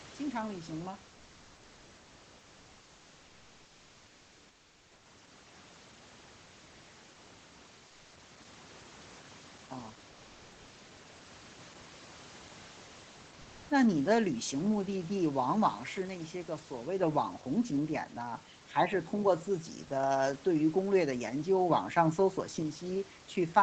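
At 7.87 to 8.11 s, and again at 13.41 to 13.69 s, the quiet background gets swapped for comfort noise: a flat, featureless hiss in place of the real room sound. The first stretch holds the same level, while the second shifts by about 2 dB. The likely cause is discontinuous transmission in Opus, where the sender stops coding during pauses and the receiver fills in synthetic noise.

Then at 16.05 s there's a sudden gain jump: speech and background both drop by about 6 dB in one step, with no fade. They stay down until 17.03 s. It's likely a gain setting applied instantly, with no ramp.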